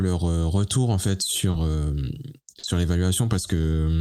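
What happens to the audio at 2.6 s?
At 2.59 to 2.65 s there is short concealed packet loss. About 40 ms of the speech arrived too late to decode. The receiver covered the gap by extending the preceding sound, then blended back into the real signal. It is heard as a brief smear.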